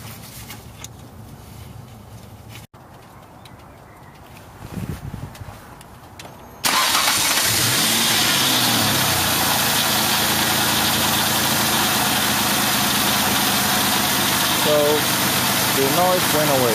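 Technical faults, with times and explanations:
Nothing stood out on listening that would count as a technical fault.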